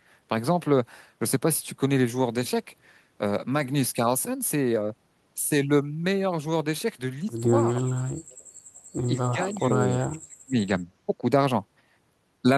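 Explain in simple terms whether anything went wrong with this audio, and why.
Speech suppressed in double talk shows up twice: a brief drop from 7.83 to 8.21 s, and a longer one from 9.09 to 10.77 s. In both spots the speech suddenly sinks to almost nothing, then returns. The likely cause is the echo canceller, the part of a call system that removes the other side's sound coming back through the microphone. When both people talked at once, it couldn't tell them apart and muted this talker too.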